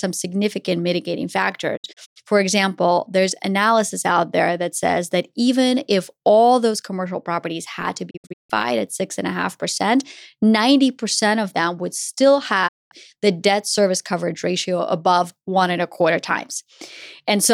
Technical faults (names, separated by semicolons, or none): digital broadcast dropout